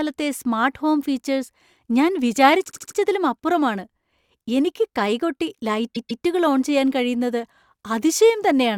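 At 2.68 s, right after "സ്മാർട്ട് ഹോം ഫീച്ചേഴ്സ് ഞാൻ", a 72 ms block of the speech plays four more times, which points to a short run of compressed frames being written more than once. The passage stretches by 288 ms. At 5.94 s, between "എനിക്ക് കൈകൊട്ടി" and "ഓൺ ചെയ്യാൻ കഴിയുന്നത്", the same repeated-frames stutter recurs with a 144 ms block heard twice more, again adding 288 ms.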